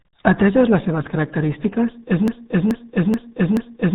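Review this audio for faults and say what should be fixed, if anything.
The whole clip carries the RealAudio 14.4 codec sound: nothing passes above about 3.8 kHz, and heavy damage from the 8 kbit/s speech coding leaves voices muffled and gargly. Encode from the original at a modern bitrate.

From 2.28 s, right after "les seves característiques és", a broken-record loop repeats a 0.43 s piece four times to the end. That likely comes from a stalled player or stream. Add stall detection and buffering.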